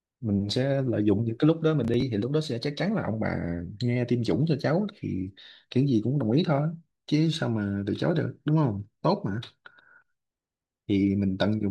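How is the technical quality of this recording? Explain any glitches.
One glitch stands out, a short burst of processor overload crackle from 1.85 to 2.02 s. The processor missed a run of deadlines, and each missed chunk was skipped, leaving tiny hard-edged gaps that fit buffers of about 5 ms. Unlike a single dropout, the result is a rapid gritty tearing riding on the speech.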